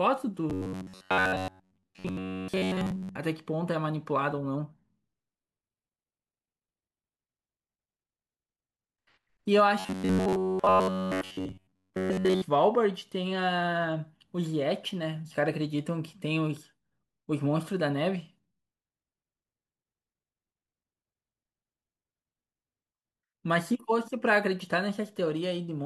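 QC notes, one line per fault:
0.50–3.15 s and 9.79–12.42 s: robotic sound from repeated short buffers. A rigid metallic 93.8 Hz buzz, likely from a looped 10.7 ms chunk replacing most of the audio. The spectrogram shows fixed, evenly spaced harmonic lines, and the waveform shows identical repeating cycles.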